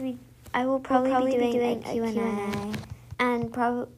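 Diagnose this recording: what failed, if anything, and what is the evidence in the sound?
A doubled audio track runs from 0.90 s to 3.14 s. A second, full-band copy of the sound trails the original by around 200 ms at roughly the same level, with no decay or room colour, so it reads as a hard repeat rather than an echo. It appears and disappears abruptly at those two times. The likely cause is a second capture path at the driver or buffer stage, or an edit holding two copies out of step.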